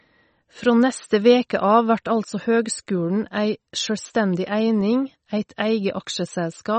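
Throughout the speech, the treble stops dead at 8.4 kHz, and the sound is watery and swirly, with metallic chirps on s sounds. That points to MP3 compression, likely at a low bitrate near 32 kbps, zeroing weak frequency lines frame by frame. A plain low-pass filter would dull the sound without that shifting, bubbly texture.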